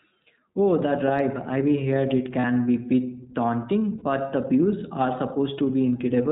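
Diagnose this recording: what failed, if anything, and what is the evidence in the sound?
Gain pumping at the input stage. The background swells between phrases and ducks by around 5 dB under each loud syllable, flattening the dynamics throughout. The likely cause is a microphone gain set far too hot, with a fast limiter clamping every peak.

The iLBC codec. The speech is band-limited to nothing above 4 kHz and has a rough, slightly synthetic texture across the whole recording. That fits iLBC's narrowband 15.2 kbps mode with 20 ms frames, which codes each frame's excitation independently.

Lost iLBC frames on the network path. At 2.40 to 2.45 s, between "drive I've heard it" and "be bit daunting", and at 3.98 to 4.03 s, between "be bit daunting" and "the views are", a 40 ms buzzy held vowel replaces the speech. That fits two dropped 20 ms frames concealed by repeating the last pitch cycle with noise.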